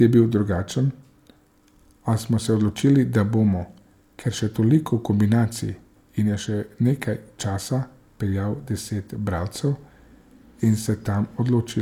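Nothing stood out as a technical fault anywhere in the recording.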